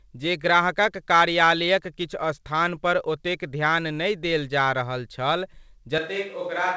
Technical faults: switch to a distant microphone

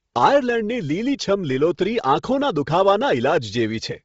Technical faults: Bluetooth LC3 compression

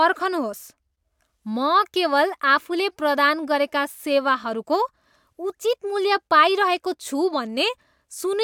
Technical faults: none

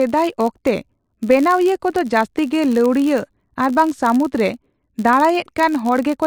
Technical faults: filter restarted on every block

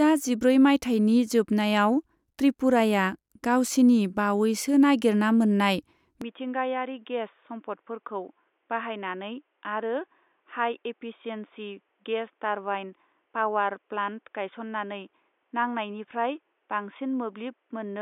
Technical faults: input switched to a poorer device

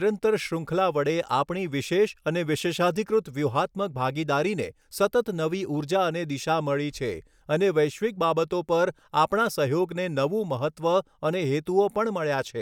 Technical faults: none

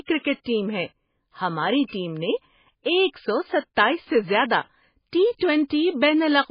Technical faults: MP3 compression; pre-echo

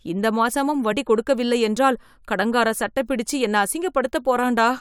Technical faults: compressed frames skipped

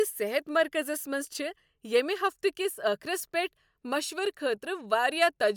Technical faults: none

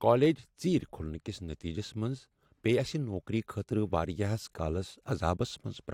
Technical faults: none

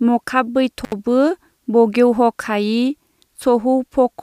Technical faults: intermittent contact

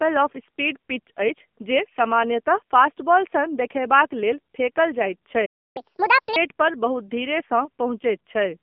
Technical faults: AMR narrowband mobile codec; playback stall; catch-up at higher speed

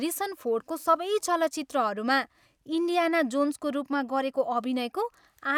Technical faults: none

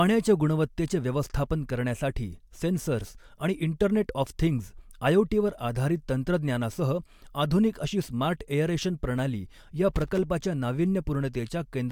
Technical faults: loose connector crackle

